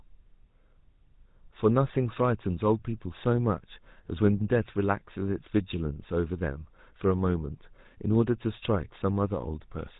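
Throughout, GSM full-rate codec damage is plainly audible: coarse pulse-driven excitation gives gravelly buzz, consistent with 13 kbps, and the spectrogram shows nothing above 3.8 kHz.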